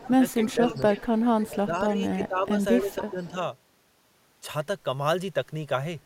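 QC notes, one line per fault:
0.00–1.48 s and 2.10–3.30 s, echo leak: a faint delayed copy of the speech trails behind it by 279 ms, sitting roughly 20 dB under the direct sound. The likely cause is a far-end speakerphone whose echo canceller let some of its mic pickup slip back down the line.
0.05–0.98 s and 1.45–3.35 s, speech suppressed in double talk: the talker's level dips in patches, up to around 10 dB, for a bit under half a second in the first stretch and about a second in the second. That's likely the canceller ducking everything while both ends talked at once.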